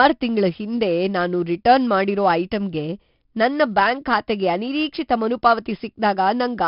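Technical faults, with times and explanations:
Throughout, 4-bit ADPCM compression: a gritty hiss rides on every louder stretch of speech, with roughness on sharp onsets and nothing above 5.3 kHz. Each sample is coded as a coarse 4-bit step from a prediction, and the bandwidth points to roughly 44 kbps at a low sample rate.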